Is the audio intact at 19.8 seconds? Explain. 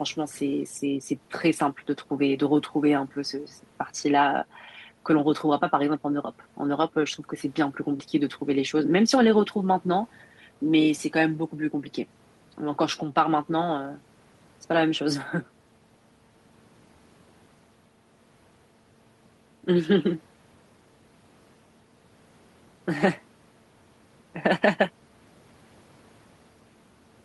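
Yes, at 19.8 seconds the speech runs through intact, with no audible fault at that moment.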